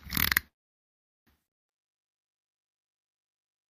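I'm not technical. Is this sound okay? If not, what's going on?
No. From 0.47 s to 1.29 s there is a call audio freeze: the sound stops and the line goes quiet for about 0.8 seconds, then picks up exactly where it left off. This is likely caused by pieces of the call getting held up in transit, so the receiving end ran out of audio to play and filled the wait with silence. Nothing was lost, but everything after that point arrives about 0.8 seconds late.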